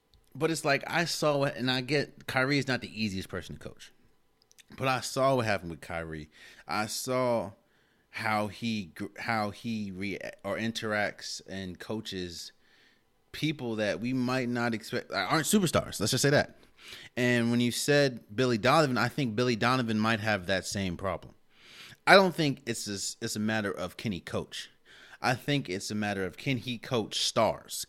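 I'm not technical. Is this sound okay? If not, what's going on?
Yes, this sound is okay, and nothing is going on with it that you need to worry about.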